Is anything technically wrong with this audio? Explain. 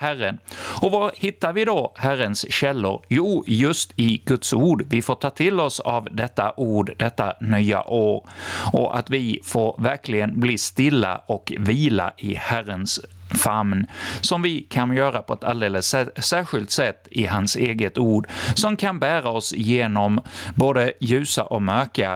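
Yes. Gain pumping throughout: the level ducks by around 20 dB under each loud sound and the speech sounds squashed, likely from excessive input gain driving a fast limiter.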